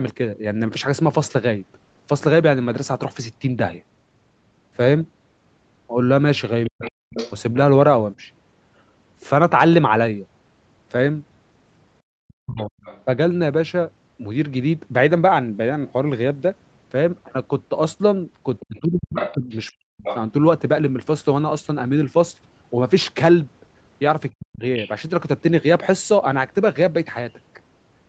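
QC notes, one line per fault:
6.67–7.13 s, 12.32–12.71 s, 18.69–20.06 s, 24.3–24.63 s: speech suppressed in double talk. The voice dips by up to about 40 dB while the far side plays on the loudspeaker, likely the echo canceller ducking both. A plain dropout ignores the overlap.
6.81–7.33 s, 12.28–13.03 s, 18.6–20.17 s, 24.79–24.91 s: other side's voice leaking through. A second, fainter voice, about 10 to 25 dB under the talker, is likely residual loudspeaker echo the canceller missed. Room reverb would copy the talker instead.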